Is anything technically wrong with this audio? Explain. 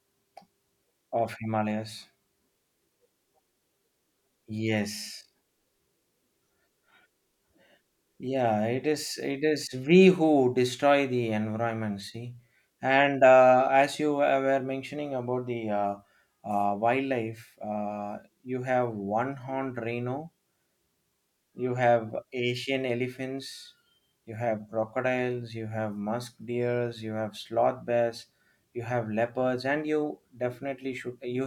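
No, nothing is technically wrong with this audio.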